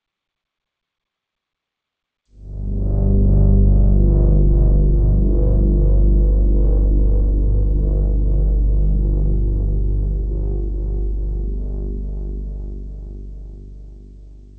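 No technical faults are present: the level rises in a smooth fade-in from around 2 s that is complete by 3.6 s, and the audio carries the character of a WebRTC call path, with nothing above 8 kHz, which fits the G.722 codec at 64 kbps.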